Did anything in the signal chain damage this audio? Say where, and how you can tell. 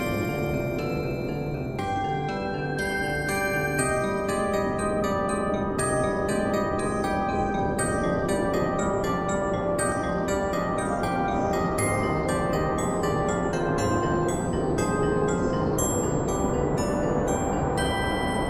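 Yes. At the driver or buffer stage the capture software likely fell behind and the hardware overwrote samples before they were read, a dropped buffer (overrun). At 9.92 s and again at 16.67 s the audio jumps forward with no gap of silence, roughly 5 ms of sound missing each time. The material on either side of the missing piece is butted straight together, so the waveform breaks abruptly and the continuity of the sound skips.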